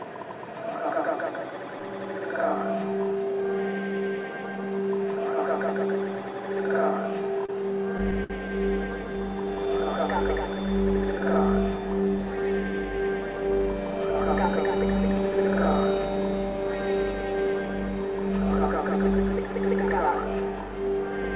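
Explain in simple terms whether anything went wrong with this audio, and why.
Repeated stalls (stutter) run from about 7.22 to 8.32 seconds. In that stretch the sound hiccups seven times. The pieces of audio arrived late or more slowly than they were being played, so the receiver's small waiting store kept running dry. Each time, it stretched out the last bit of sound to cover the wait, the longest about 59 ms. Nothing is lost, but that second drags and stumbles, heard through the call line's muffled sound with nothing above 4 kHz.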